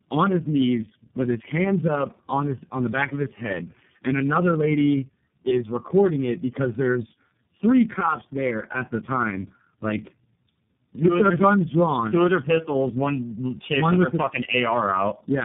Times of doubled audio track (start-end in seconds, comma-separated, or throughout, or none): none